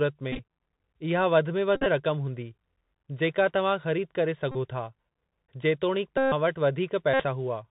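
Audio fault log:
throughout, Bluetooth CVSD headset codec: the one-bit up/down coding, consistent with a 64 kbps stream, cuts everything above 4 kHz, roughens s sounds and adds granular hiss. A spectrogram shows a hard 4 kHz ceiling over a grainy noise floor.
0.32–0.40 s, 1.76–1.87 s, 4.52–4.55 s, 6.18–6.32 s, 7.14–7.25 s, Bluetooth headset packet repeated: lost packets are refilled with the previous packet's bits. That repetition every 3.75 ms buzzes near 267 Hz, longest around 6.18 and 7.14 s. The spectrogram shows evenly spaced harmonic stripes, and the waveform shows a short cycle repeating.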